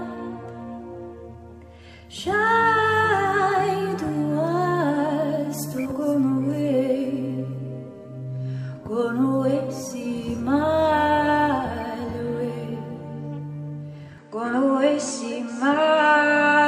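At 14.18 s the sound changes character and stays that way until the end at 16.67 s. Nothing above 9.6 kHz remains, so the top end turns dull or boxy. A faint new background noise appears, about 45 dB below the signal. The level stays much the same, and there is no gap at the change. This is likely an input switched to a poorer device partway through the recording.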